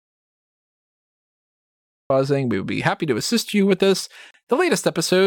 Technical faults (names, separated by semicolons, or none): audio dropout to silence; Bluetooth stall